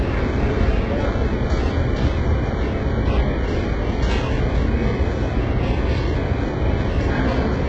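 The audio was likely squeezed through HE-AAC compression at a starved bitrate, with only the lower spectrum truly coded and the treble synthesised by copying lower bands upward under a coarse envelope. Across the whole clip this leaves heavy codec damage: nothing survives above 8 kHz, and the rebuilt upper range sounds gritty and metallic because its partials don't line up with those below the crossover. The damage points to a very low rate, around 8 kbps.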